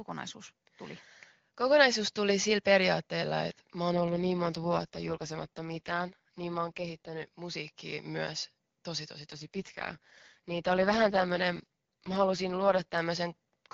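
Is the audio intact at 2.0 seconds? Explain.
Yes, the speech at 2.0 seconds is intact, with no fault at that moment beyond the AMR wideband (HD Voice) coding it passes through at 23.85 kbit/s.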